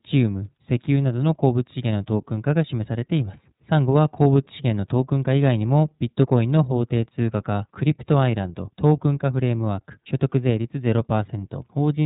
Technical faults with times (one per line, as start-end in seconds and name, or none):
0.00-12.05 iLBC codec